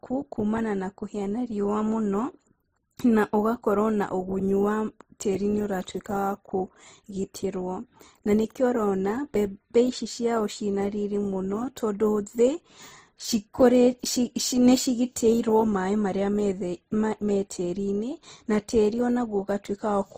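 Speech runs through the whole clip with layered compression damage. Nothing is present above 15.6 kHz, so the top of the spectrum is sharply cut away. The smearing and swirl of one codec sit on top of another's. This is likely transcoding between lossy codecs. The sound fits an MP3 at about 41 kbit/s re-encoded to Opus at about 24 kbit/s. The second encoder wastes bits on the first one's artefacts and adds its own.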